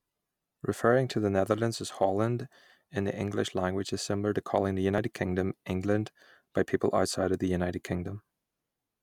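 At 2.70 s and again at 4.98 s the speech jumps forward, with no silence at either join; the likely cause is a dropped buffer (overrun), losing about 10 ms and then about 30 ms. A waveform shows an abrupt discontinuity, and a spectrogram a thin vertical broadband line.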